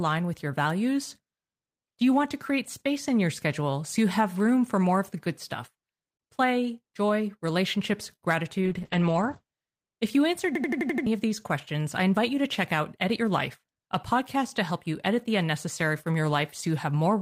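At 8.15 s a short stall from a late packet holds the sound for 52 ms until 8.24 s. The jitter buffer ran dry and the receiver stretched the last sound while waiting. Nothing is skipped, which separates it from a dropout: one sound simply lingers with a slight buzz or dip.

From 8.65 s to 9.79 s a call bitrate drop takes the encoding from 32 kbps down to 9 kbps for about a second. The band narrows from 20 kHz to 8 kHz, so the speech is both muffled and coarse and watery. That coarse coding is what tells it apart from a plain low-pass filter.

Between 10.55 s and 11.07 s a system hang loop repeats one 85.33 ms slice six times, a stutter at 11.7 Hz. This fits a 4096-sample ring buffer cycling while the system froze, and roughly half a second of audio is lost. Unlike the stall, the same fragment recurs exactly.

From 12.19 s to 13.3 s a jitter buffer speed-up plays the speech at 105% speed. 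Short pitch-period pieces, roughly 50 ms in total, were trimmed to shrink the backlog. The pitch stays unchanged, which distinguishes this from a resampling error: the speech just sounds slightly hurried.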